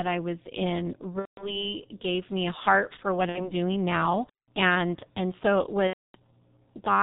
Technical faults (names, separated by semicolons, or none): G.723.1 codec; VoIP packet loss concealed by the speech codec